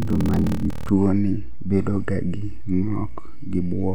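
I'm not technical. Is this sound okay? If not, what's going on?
No. From the start to 0.90 s, just before "ni bedo ga", there is a block size mismatch (padded). One stage hands over short chunks, and the gaps are filled with silence. This causes a 38 Hz buzz, and the speech drags at 0.889 times normal speed with the voice's character unchanged.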